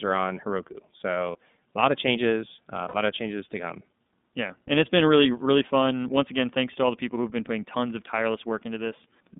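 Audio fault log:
throughout: iLBC codec. Audio is confined to roughly 200 Hz to 3.6 kHz, with plainly audible rough, synthetic coloration, which fits iLBC's 13.33 kbps, 30 ms-frame mode.
1.32–1.35 s and 2.88–2.94 s: lost iLBC frames. Brief held, buzzy vowel-like fills of 30 ms, before "a lot of changes", and 60 ms, between "lot of changes uh" and "of changes to come", where the decoder repeats the last pitch cycle with noise. Clarity returns immediately after each gap.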